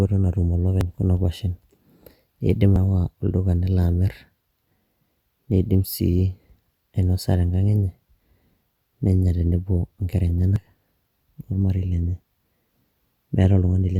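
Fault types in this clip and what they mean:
Audio missing between chunks: the speech skips forward at 0.81, 2.76 and 10.56 s, losing around 50 ms each time. The edges are joined directly instead of leaving the silent gap a dropout would. The two-second spacing likely reflects chunked processing.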